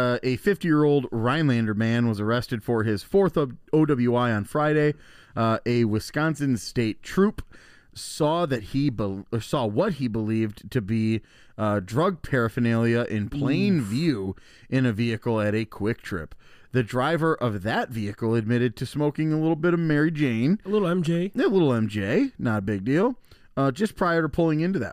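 A speech recording with nothing technically wrong to report. No event in it calls for a time or a cause.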